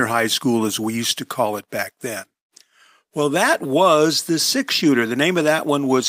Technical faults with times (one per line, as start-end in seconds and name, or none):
none